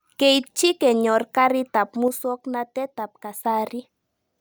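At 2.08 s, right after "kenyor karik ab", the speech abruptly drops by about 6 dB and stays quieter until 3.45 s, roughly 1.4 s, before snapping back. The likely cause is one channel drops out: with one stereo side missing, the mono sum keeps only half the shared signal. On a waveform the envelope halves in height with clean vertical edges; a spectrogram shows a uniform darkening across all frequencies over that span.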